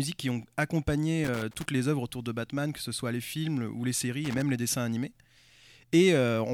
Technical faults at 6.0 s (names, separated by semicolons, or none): none